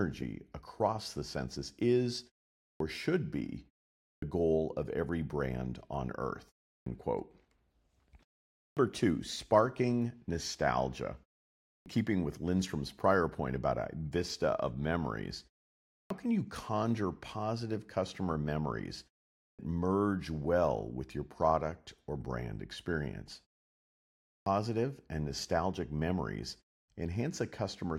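Clipped start after a pause at 2.70, 4.11, 6.75, 8.66, 11.75, 16.00, 19.48 and 24.36 s: the output device sleeps through each silence, and waking swallows the first 0.10 to 0.11 s, so words such as "two sparking nostalgia" and "merge well with your" begin abruptly.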